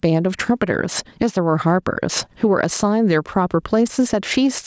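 Speech with gain pumping throughout: the gain swings by around 10 dB, likely from an over-driven input gain feeding a fast limiter. The call microphone processing caps the band at 8 kHz.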